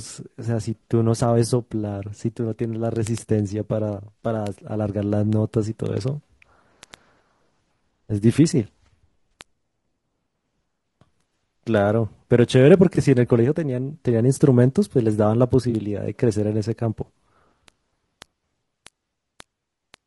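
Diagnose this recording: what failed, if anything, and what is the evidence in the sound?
The codec stage is at fault throughout this speech. The voice is rough and grainy, with noise filling the gaps between harmonics and a thin, synthetic top band. This is likely low-delay AAC compression (AAC-ELD) at a low rate, around 32 kbps. On a spectrogram, harmonics look smeared and the spaces between them are hazy.

Network delivery also shows AAC frame loss with concealment at 0.83–0.87 s, 4.19 s, 9.31 s, 12.95–12.98 s and 15.69–15.74 s. Each is a brief smeared, phasey patch where the decoder repeated or interpolated the last good spectrum. Each one fits one or two lost 20 ms frames. The spectrogram shows blurred, stationary slices, and the waveform shows a small envelope discontinuity.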